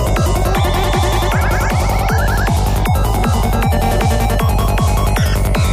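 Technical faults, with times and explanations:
3.90 to 5.67 s, GSM phone buzz: a steady, raspy 217 Hz buzz with dense harmonics at about -21 dB, from a nearby phone's call bursts rectified in the audio circuit.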